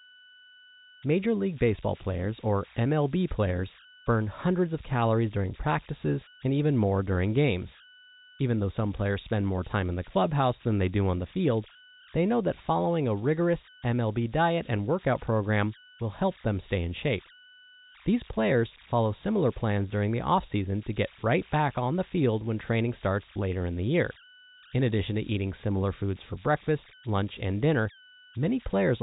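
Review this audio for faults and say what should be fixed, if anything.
Converter idle tones persist throughout: a whistle near 1.5 kHz in pauses and grain about 22 dB under the speech, from undithered delta-sigma bit patterns. Enabling dither at the converter would break up these repeating patterns and remove the tones.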